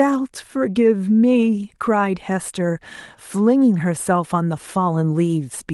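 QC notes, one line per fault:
No faults are present in this speech clip, whose call-path coding leaves the expected band limit of about 12 kHz and its ordinary codec texture.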